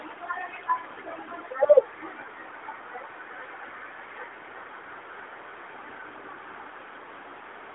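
From 2.33 s to the end, a feedback echo between two devices trails the speech: a second device replays the sound into a nearby microphone, so each phrase returns roughly every 400 ms, peaking about 22 dB below the speech. The fixed spacing sets it apart from diffuse room reverberation. The repeats stay within the narrow AMR-NB phone band.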